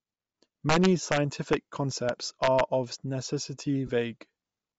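Across the whole speech clip the upper frequencies sound breathy and grainy, with a fizzy, noise-like sheen where crisp detail should be. This plainly audible damage is likely Bluetooth LC3 compression. The LE Audio transform codec, working in 10 ms frames at a rate that fits around 32 kbps, discards much of the upper spectrum and fills the gaps with synthetic noise, which gives speech its rough, hissy edge.

From 0.69 to 1.17 s, loud passages break into violent, sharp cracks that are far harsher than ordinary clipping. A single brief crack follows at 1.53 s, and another run of cracks lasts from 2.09 to 2.60 s. This is integer overflow. When peaks exceeded the largest representable value, by about 4 dB in the first run, about 1 dB at the single crack and about 2 dB in the last run, the samples wrapped around to the opposite sign instead of being limited, so each overshoot jumped across the full range.

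Between 3.87 and 3.90 s, a 20 ms stretch loses its clear tonal structure and turns into a short, noisy smear. These are lost LE Audio frames, and the duration fits two missing 10 ms frames. The LC3 decoder covered the gap by reusing the previous spectrum with randomised signs, so the harmonic detail turned to noise until normal frames resumed.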